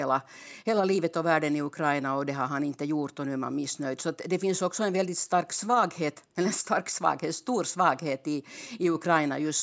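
No faults detected in the speech; the only processing heard is the call microphone chain, whose high-pass trims the lowest bass and whose band tops out at 8 kHz, both normal for that path.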